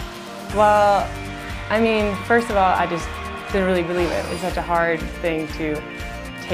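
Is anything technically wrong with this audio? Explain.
No, nothing is technically wrong with this audio.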